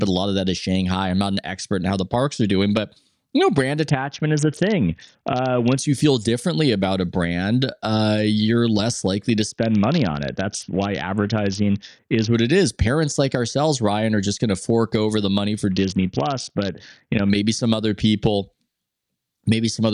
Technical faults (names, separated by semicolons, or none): Bluetooth SBC bit pool drop